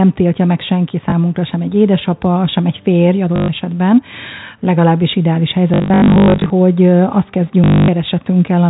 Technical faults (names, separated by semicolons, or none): packet loss with last packet repeated